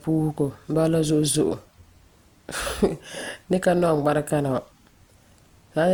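Low-bitrate audio saved at a high bitrate, throughout: the speech carries artefacts from a likely earlier low-rate encode, and the later high-rate re-encode cannot restore what was lost.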